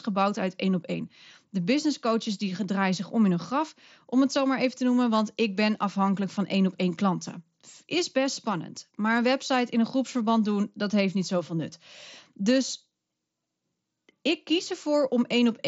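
Nothing stood out on listening to this speech recording, which carries the narrowed sound of a Bluetooth mSBC headset link with nothing above 7.7 kHz.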